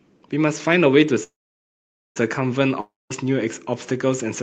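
A speech recording carried over a call link, with Opus coding limiting the top end to about 8 kHz. From 1.23 to 2.18 s there is a call audio freeze: the last sound stretches into a short fading buzz, then about 0.85 s of silence, and the speech resumes exactly where it stopped. This is likely a jitter buffer running dry while packets were delayed, adding about 0.92 s of lag without losing material. From 2.81 to 3.12 s a long network dropout gives a similar fading fill and about 0.2 s of silence, but here roughly 0.3 s of speech never returns, most likely because those packets were lost in transit.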